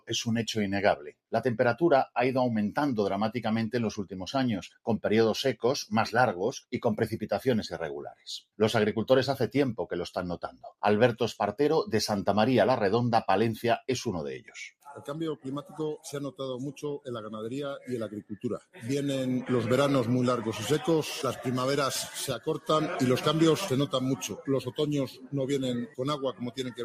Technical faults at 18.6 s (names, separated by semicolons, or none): noise suppressor applied to music or sounds; sound cut by the noise suppressor